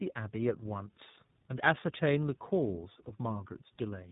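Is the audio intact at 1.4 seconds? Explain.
No. At 1.4 seconds, as throughout the clip, there is tandem speech coding. The speech passed through two low-rate speech codecs in a row, consistent with GSM full rate and then iLBC. Each re-coded the last one's damage. It sounds rough, muffled and warbly, with nothing above 3.8 kHz.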